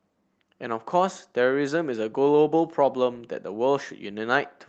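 No audible technical faults.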